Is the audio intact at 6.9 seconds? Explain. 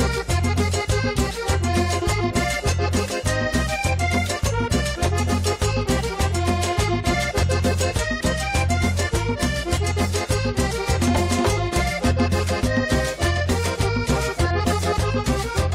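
Yes, the audio is intact at 6.9 seconds, with no dropout, click, distortion or other fault audible at that point.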